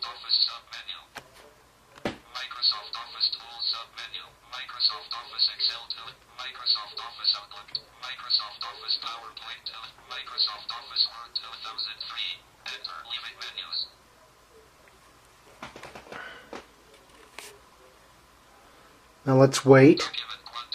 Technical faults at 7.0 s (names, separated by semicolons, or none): none